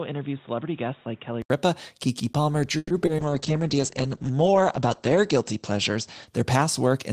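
Input switched to a poorer device, 0.0 to 1.5 s: for the opening stretch the speech sounds boxy and dull, with nothing above 3.8 kHz, a level roughly 10 dB lower and a background hiss only about 30 dB under the signal. This likely comes from the system capturing through a narrower-band device, such as a headset's call profile, before switching back. At 1.5 s an 80 ms silence marks the change, and the fuller sound returns.

Call audio freeze, 2.77 to 2.92 s: the speech stalls and the last sound is drawn out as a fading buzz or hiss for about 130 ms, then drops to 20 ms of silence before resuming exactly where it stopped. The likely cause is packets held up in transit, so the jitter buffer emptied and the receiver stretched what it already had. Nothing is lost, but everything after this point now runs 130 ms late.

Short concealed packet loss, 3.06 to 3.09 s and 3.17 to 3.20 s: two brief smears, about 30 ms each, land in quick succession. 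In each, 20 ms of audio never reached the decoder. The receiver extended the preceding sound for about 10 ms and blended it back into the real signal, so a sliver of speech is simply gone and a small wobble stands in its place.

Call bitrate drop, 3.22 s to the end: the encoder's budget falls from 32 to 9 kbps, holding at the lowest rate for 1.44 s, and the audio bandwidth narrows from 20 kHz to 8 kHz. With so few bits, Opus codes coarsely and discards the top of the spectrum. The result is speech that turns muffled and watery for the rest of the clip.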